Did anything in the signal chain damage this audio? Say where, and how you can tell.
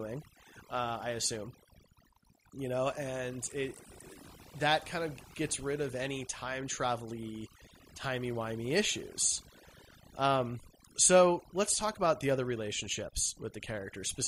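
Yes: overdone noise removal in the noise-reduction processing, throughout. Bands near the noise estimate are gated out, leaving near-silent gaps with twinkling specks.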